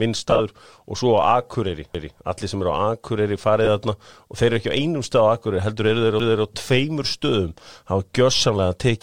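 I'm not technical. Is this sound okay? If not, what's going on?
No. There are two kinds of problem in this speech clip.

Lost LE Audio frames: the wireless Bluetooth link dropped small slices of sound, and the receiver filled each gap with a roughened copy of what came just before. That comes out as a brief hissy smear from 0.30 to 0.41 s, made of several short gaps (the longest about 30 ms), and again from 3.65 to 3.68 s.

Overlapping chunks: the audio was handled in 4-second pieces, and each piece began a little before the previous one finished. So 250 ms of sound plays twice, heard as a stutter from 1.95 to 2.20 s and again from 6.20 to 6.45 s.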